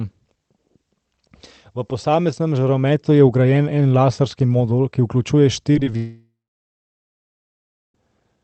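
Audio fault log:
5.73–5.95 s, repeated packet loss (robotic sound): Over about a fifth of a second, four short holes open up in the speech, none longer than about 14 ms, adding up to roughly 50 ms gone. Each one gets patched by stretching out the sound just before it, so about a quarter of that span is filler. With the patches coming back to back, you hear a choppy warble instead of clean speech, like a robot briefly taking over.
5.97–7.95 s, long network dropout: Right after that, the audio cuts out for almost 2 seconds. At first the receiver keeps extending the last bit of sound into a buzz or hiss that fades away, then about 1.6 s of plain silence follows before the speech picks up again at 7.95 s, with the lost stretch skipped. This is likely a long network outage on the call path, which is otherwise band-limited to about 8 kHz by its codec.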